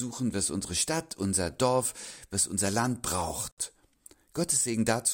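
Separately encoded pieces were joined without trimming the encoder's start-up delay and final-frame padding, leaving a gap at a join of encoded pieces. At 3.51 s the continuous sound drops into silence for about 64 ms, until 3.58 s, with its edges smeared by the codec, then resumes exactly where it stopped. The join position fits pieces cut at 4-second intervals, so only one seam falls within this short clip.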